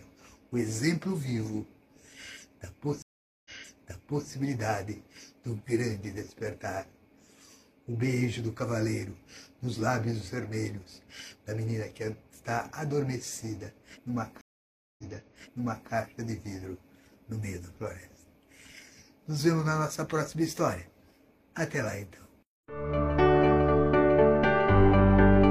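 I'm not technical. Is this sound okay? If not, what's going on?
No. At 3.02 s and 14.41 s there is a stream reconnect: the connection broke, leaving about half a second of silence, then the sound restarted almost a second earlier, repeating a bit, unlike a dropout, which simply skips ahead.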